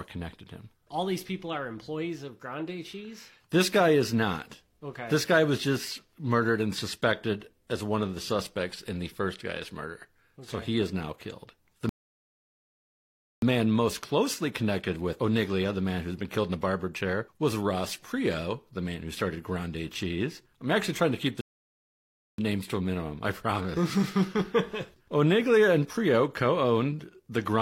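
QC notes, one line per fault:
11.89–13.42 s rebuffering stall: playback runs dry and goes silent for about 1.5 s, then resumes exactly where it stopped once more data arrives, so nothing is lost.
21.41–22.38 s rebuffering stall: the player again empties its buffer and halts for about 1.0 s, adding that time as silence before the speech continues seamlessly from the same point.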